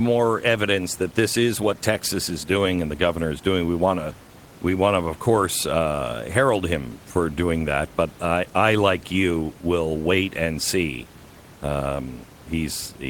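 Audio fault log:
No faults are heard in this speech clip. Room noise sits in the background about 22 dB below the speech, as part of the recording itself.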